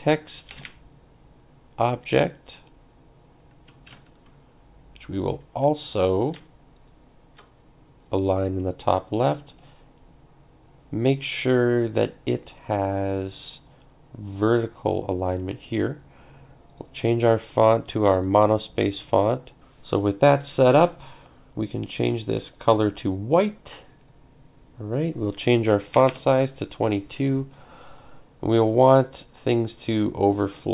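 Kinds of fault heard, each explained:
No kinds of fault are heard in the clip.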